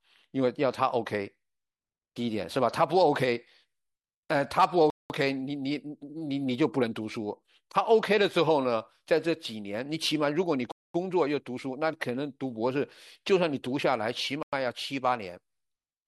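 The speech drops out three times: at 4.90 s for about 0.2 s, at 10.72 s for about 0.23 s, and at 14.43 s for 0.1 s. Each gap is clean silence, and the audio resumes without a fade. These sound like a Bluetooth stall. The likely cause is radio interference delaying packets. The headphones' buffer emptied, and playback waited for the resent data before carrying on.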